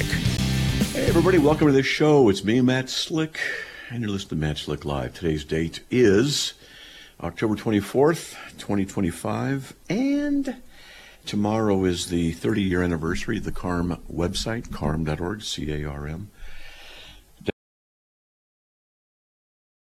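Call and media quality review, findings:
Short hole at 0.37 to 0.39 s, about 15 ms of sound missing, playback picks up as if it kept running. Looks like a Bluetooth dropout, likely one late packet the headphones gave up on and skipped.

Audio dropout to silence from 17.5 s right through to the end. Dead silence with no room tone underneath, cut mid-flow. Input link or device probably lost, and the recorder kept writing silence.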